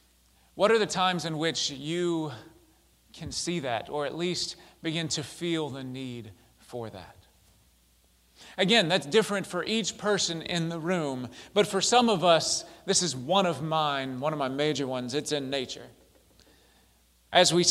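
No technical faults can be heard anywhere in the audio. There is no event to point to and no moment that needs a time.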